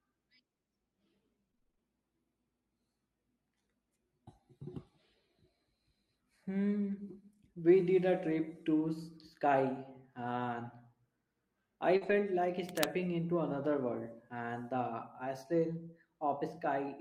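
Right at the start, from 1.51 to 1.79 s, there's a burst of repeated packet loss, and it goes robotic. Seven separate holes land in under 0.3 s, the longest 23 ms. The receiver papers over each one by stretching out the last bit of speech, so about half that stretch is concealment rather than real audio. You hear a choppy warble with pieces of the speech missing.

At 6.91 s and again at 8.31 s there's a lost packet rebuilt from error correction. Each is a 20 ms slice, which sounds like a single packet, where the decoder fell back on the low-bitrate copy carried in the next packet. There's no gap, just a short moment where the speech turns rougher and a bit noisier before the full-quality stream picks up again.

From 11.97 to 12.03 s there's a short concealed packet loss, about 40 ms that never made it in time. The decoder filled it by extending the sound it already had and then blended back into the real signal, which comes across as a brief smear or wobble. 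Right on its heels, from 12.01 to 12.11 s, comes another stretch rebuilt from error correction. This one is 60 ms, which suggests about three packets, so the roughness lingers a little longer there.

Then from 12.68 to 12.85 s there's cable scratch noise. Dense, uneven bursts of scratchy rustle sit on top of the speech, not far below its level at roughly 5 dB under. It's most likely a worn cable or connector being moved, with its contact resistance jumping around.

One last error-correction rebuild shows up at 13.53 s, another 20 ms patch with the same brief grainy roughness as the earlier ones. All of this rides on an Opus call path with audio up to 12 kHz and the coding texture you'd expect at something like 40 kbps.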